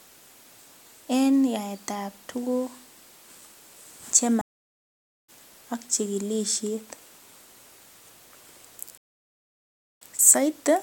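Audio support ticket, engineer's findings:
Stream reconnect, 4.41–5.30 s and 8.98–10.00 s. Speech cuts to silence (0.87 s, then 1.03 s) as the connection drops; the player reconnects and restarts a fresh decoder mid-stream. The first resumes roughly a second further on, at "ak chigilisiet"; the second resumes only slightly later.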